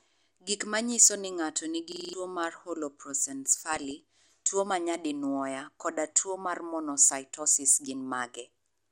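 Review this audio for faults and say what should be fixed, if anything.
Throughout the speech there is plainly audible dullness with a gurgling, granular texture, which is likely MP2 compression at around 80 kbps. The encoder has too few bits, so whole upper sub-bands switch off and the remaining ones are coarsely quantised. On a spectrogram the treble is cut flat in blocky steps, with bands flickering on and off in patches from frame to frame. Encoding at a higher bitrate, or with a more efficient codec, would prevent this.

From 1.92 to 2.13 s, right after "manyiso ni ng'ato", a system hang loop repeats one 42.67 ms slice five times, producing a rough buzz at 23.4 Hz. The loop length fits a 2048-sample buffer that the sound hardware kept replaying while the system stalled. About 200 ms of real audio is lost. The waveform shows identical repeating blocks, and the spectrogram shows vertical stripes spaced evenly with harmonics at multiples of 23.4 Hz. 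Preventing the driver or system freeze, or using a watchdog that mutes a stalled output buffer, would stop it.

From 3.72 to 3.91 s, just before "tuwo ma nyadinwoya koda", DAB burbling breaks into the speech. Bit errors from weak reception slipped past error correction into the MP2 data, which corrupted samples so that short blips of noise appeared in single sub-bands. The error rate was a small fraction of a percent, spread over what sounds like several consecutive frames. The spectrogram shows isolated bright horizontal dashes in individual bands, and the waveform shows brief irregular bursts. Better reception, with a stronger signal or a better antenna, would prevent it.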